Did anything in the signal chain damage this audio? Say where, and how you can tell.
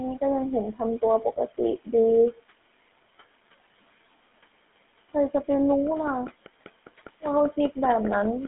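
Yes. A GSM full-rate codec stage colours the whole speech clip. Nothing reaches above 3.8 kHz, the band sits within 200 Hz to 3.5 kHz, and a buzzy, gravelly roughness runs throughout, pointing to a 13 kbps GSM link. Coarse pulse-driven excitation of a vocal-tract model causes this.

A train of clicks runs from 5.87 s to 8.46 s: about fifteen near-identical pops at a steady five per second, peaking around 10 dB above the speech and audible over room noise about 21 dB down. Interference from nearby equipment or a faulty connection is the likely cause.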